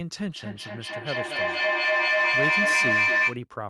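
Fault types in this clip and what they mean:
Feedback howl: a microphone and loudspeaker on the same call share a room, so each pass around the loop returns louder rather than quieter, and the sound narrows to one ringing tone near 2 kHz. It starts at 0.36 s and keeps going until 3.45 s, repeating about every 200 ms and peaking about 8 dB above the speech. An echo fades with each repeat, but this one climbs and holds its pitch until the loop is broken.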